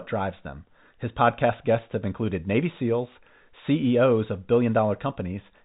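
No technical faults are audible.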